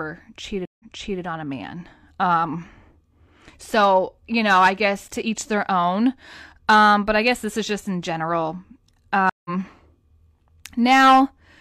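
Stream reconnect at 0.65 to 1.21 s, and again at 9.29 to 9.50 s: each time the connection drops, the speech stops dead, and a fresh decoder picks the stream up mid-flow. The first gap lasts 143 ms, and the speech resumes 418 ms earlier, so a short stretch repeats as the server resends buffered audio. The second gap lasts 154 ms and rejoins roughly 150 ms later, skipping a sliver of speech.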